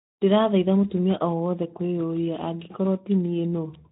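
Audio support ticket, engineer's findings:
Speex codec damage across the whole speech clip. Plainly audible hoarse, noisy grain, consistent with a CELP coder given too few excitation bits at a low setting near 11 kbps. Spectrogram: blurred harmonics.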